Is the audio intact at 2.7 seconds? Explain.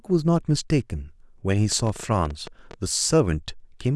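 No. At 2.7 seconds the speech sits inside a train of clicks running from 1.72 to 2.74 s: about ten sharp pulses at an irregular pace averaging 10.8 per second, each reaching about the level of the speech itself. They are heard as uneven ticking over the sound, likely from interference by nearby equipment or a faulty connection or power supply. A waveform shows narrow, near-identical spikes; a spectrogram shows thin vertical broadband lines at uneven spacing.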